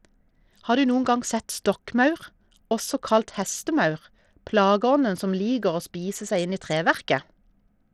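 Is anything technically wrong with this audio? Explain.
Yes. Throughout this speech, the treble flickers and drops out under a gritty, aliased noise, likely from Bluetooth SBC compression at a low bit pool, around 80 kbps. A plain low-pass would cut cleanly. Here the crude sub-band bit allocation starves and coarsely quantises the upper bands.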